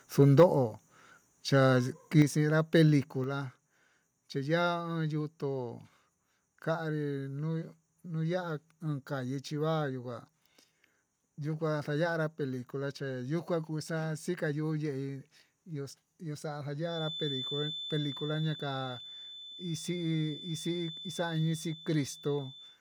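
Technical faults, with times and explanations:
0.19 to 0.44 s and 2.19 to 2.22 s, microphone overload. The loudest speech peaks are flattened at the top, giving a harsh, crackly edge. The first burst is the worse one, running about 5 dB past the converter's limit. The second goes only about 1 dB over and is brief. A small share of samples is cut, a few percent at most. The likely cause is microphone input gain set too high, so the converter ran out of headroom.
0.40 s, 2.22 s and 3.24 s, microphone volume stepped down. The speech and the background drop together in a single step each time. The cuts are about 3 dB, then about 6 dB, then about 4 dB. The first comes during a clipped peak, and the second right as one ends. This likely reflects the call software reacting to overload by lowering the device's input volume. It moves in one jump, so the change is audible.
16.79 to 22.80 s, feedback whistle. 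A thin, steady tone at 3.5 kHz sits behind the speech until the end. It stays roughly 10 dB below the speech and swells and fades slowly in level. It never grows into a howl. That points to a loudspeaker-to-microphone loop, the likely cause, with its gain resting just under the feedback threshold. One frequency keeps circulating without building up.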